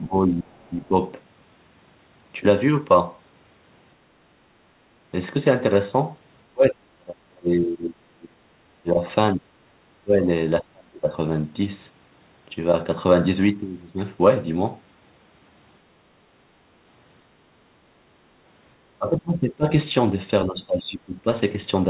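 Speech suppressed in double talk hits at 0.0 to 0.95 s, 6.51 to 9.01 s, 9.35 s, 10.04 to 10.28 s, 10.61 to 11.1 s, 18.98 to 19.66 s and 20.46 to 21.27 s. Each time, the talker's level sinks by about 20 to 35 dB. The longest and deepest dip runs about two seconds. The likely cause is an echo canceller that could not separate the near talker from the overlapping far-end echo and turned the near talker down with it.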